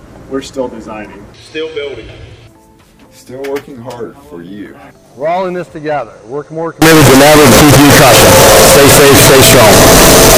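At 6.82 s the sample data was likely written as 32-bit float but read back as 32-bit integer, so each sample's sign and exponent bits now decide its level instead of the waveform itself. This float read as integer fault lasts to the end at 10.38 s, and the sound turns into a near-square wave sitting at an almost fixed, high level: abruptly very loud and harsh, with background noise raised to the same level as the foreground, though its pitch contour remains traceable.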